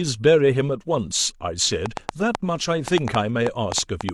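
From 1.86 s to 4.10 s a train of clicks, around fifteen at about 5.4 per second and irregularly spaced, ticks sharply above the speech, likely from interference or a faulty connection.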